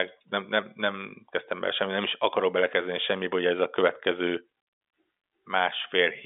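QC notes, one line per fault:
No faults heard; telephone band holds to about 3.7 kHz.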